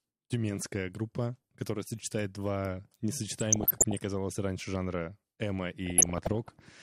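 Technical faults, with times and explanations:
3.39 to 3.98 s and 5.86 to 6.63 s, DAB burbling: both stretches pick up a burbling texture on top of the speech. Reception was weak enough that bit errors, around 0.5 and 0.4 percent, slipped past the error correction into the MP2 data. The corrupted samples put short blips of noise in single sub-bands, and the run lengths suggest a few dozen damaged frames in each burst.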